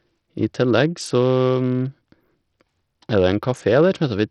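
Throughout the speech, treble flickers in and out under gritty, aliased noise, likely Bluetooth SBC compression at a starved bitpool, unlike a steady low-pass roll-off. It fits roughly 64 kbps.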